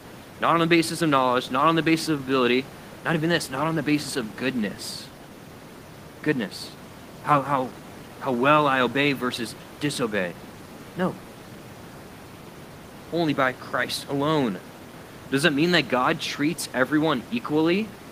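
Nothing goes wrong technically anywhere in this speech; the only thing in the background is the room's own noise, sitting about 20 dB below the talking, and that's just part of where it was recorded.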